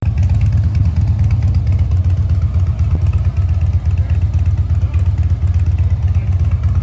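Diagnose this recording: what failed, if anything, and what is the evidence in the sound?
Two brief smears interrupt the audio, at 0.78 to 0.81 s and again at 2.95 to 2.99 s, each a short wobble where the sound seems to stretch rather than drop out. This is short concealed packet loss on the network side of the call: about 20 ms of audio arrived too late or not at all, and the receiver bridged the gap by extending the preceding sound for roughly 12 to 15 ms before blending back into real audio. The wideband ceiling at 8 kHz fits a G.722 path.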